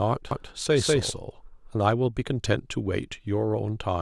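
From 0.31 s to 1.75 s the speech carries a doubled audio track: a second full-band copy trails about a fifth of a second behind at much the same level, with no decay or room colour, and starts and stops abruptly. This is likely a second capture path or an edit misaligning two copies.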